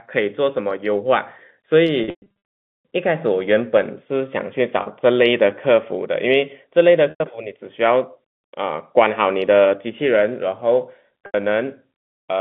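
Packet loss with pitch repetition shows up at 2.04 to 2.30 s, 4.82 s, 7.10 to 7.20 s and 11.26 to 11.34 s. Each time the receiver loops the last pitch period, giving a brief buzzy hold. The first is a scattered cluster, with a longest run of 120 ms, that fades toward silence. All of it rides on a narrow telephone band.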